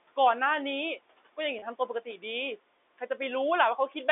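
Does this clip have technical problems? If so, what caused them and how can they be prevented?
Yes, two of them. The first is noise suppressor artifacts, and they run through the whole clip. The suppressor is pulling the background down by about 17 dB, deciding frame by frame which frequency bands count as steady noise. So the room noise, which sits about 20 dB under the speech, drops away in the gaps and creeps back up underneath the talking. To avoid it, ease the suppression depth or tame the room noise at the source so the suppressor has less to do.

The second is packet loss with pitch repetition at 1.59 to 1.62 s, a dropout of about 30 ms that sounds like a single lost packet. The receiver covered the hole by looping the last pitch period and fading it, so you get a brief held, buzzy note rather than silence. A gap that short stays a buzz and never fades all the way out. The telephone-band sound, capped below 4 kHz, is just the G.711 line doing its job. 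To prevent the dropout, give the link more jitter-buffer headroom or add forward error correction so a single lost packet can be rebuilt.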